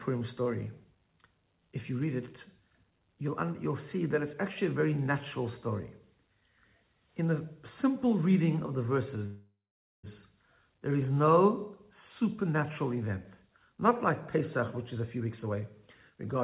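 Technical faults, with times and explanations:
9.26–10.06 s, call audio freeze: the sound stalls, the last bit carries on as a fading buzz, then there's about half a second of silence before it resumes where it left off. That's likely delayed packets draining the jitter buffer, so about 0.77 s of gap gets inserted and nothing is lost.
14.94–16.42 s, jitter buffer speed-up: the audio runs at about 116% speed with unchanged pitch, so it feels rushed. The receiver is trimming tiny pitch-period slices back to back, roughly 0.3 s in total, to claw back the extra delay built up earlier.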